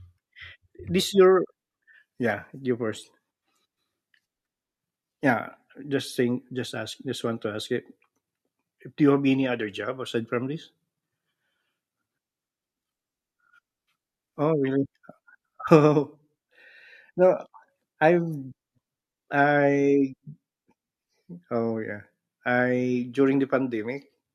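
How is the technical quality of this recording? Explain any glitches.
The recording's technical quality holds up, with no glitches to explain in this speech clip. Nothing in it stands out as a technical fault.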